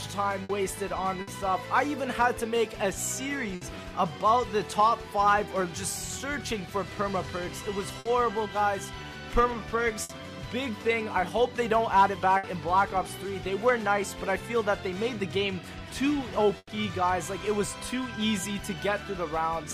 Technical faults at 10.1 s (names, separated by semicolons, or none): burst of packet loss